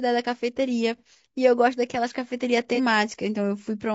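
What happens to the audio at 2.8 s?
A brief smeared, noisy patch runs from 2.75 to 2.80 s. This is AAC frame loss with concealment: about 30 ms of coded audio went missing, and the decoder patched the gap from the last good spectrum. Around it, the sound stays rough and grainy, with noise between harmonics and a lowered or synthetic top band, likely from low-delay AAC compression at 32 kbps.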